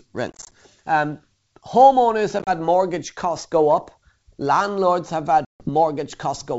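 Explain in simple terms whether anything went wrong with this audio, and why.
Packet loss on an ADPCM call causes short, hard-edged gaps at 0.32–0.52 s, 2.39–2.50 s (just before "mortgage costs go up") and 5.45–5.70 s. Each time, the decoder loses track of the sender and the speech briefly returns slightly distorted.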